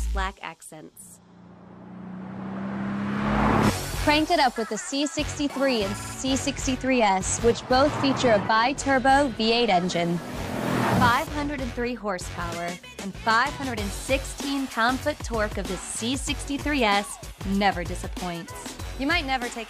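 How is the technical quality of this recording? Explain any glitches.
Two stutters from repeated frames mar the recording. At 5.98 to 6.13 s, a 39.2 ms block replays three extra times, consistent with three compressed frames being resent, adding 148 ms. At 16.59 s, an 8.7 ms block repeats twice, adding 17.4 ms.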